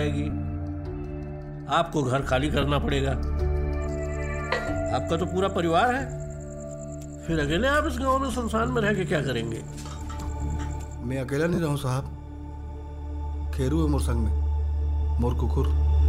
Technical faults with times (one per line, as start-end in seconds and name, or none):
0.30-0.32 lost LE Audio frames
2.62 lost LE Audio frames
8.32-8.34 lost LE Audio frames
11.54-11.58 lost LE Audio frames